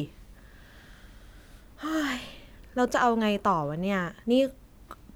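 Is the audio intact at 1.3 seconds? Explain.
Yes, the speech at 1.3 s is intact, with no dropout, click, distortion or other fault at that moment.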